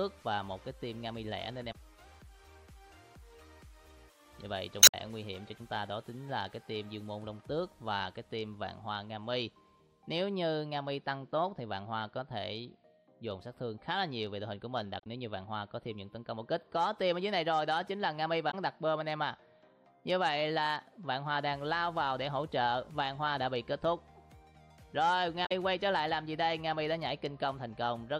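Damaged data in a compressed stream breaks in five times: 1.69–1.75 s, 4.80–4.94 s, 14.98–15.07 s, 18.47–18.54 s and 25.42–25.52 s. Corrupted bytes make the decoder misread frames and lose sync. Each break is a brief chirp, squawk, click or short hole.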